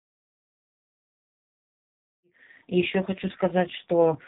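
AMR narrowband mobile codec damage runs through the whole of this speech clip, from start to finish. Nothing above 3.8 kHz survives, and the voice comes out buzzy and synthetic. It is rebuilt from a vocal-tract model driven by only a few pulses per short subframe, and damage this heavy fits one of the codec's lowest modes, around 5.9 kbps. The smooth fade-in from about 2 s to 2.9 s passes through the same muffled, buzzy sound.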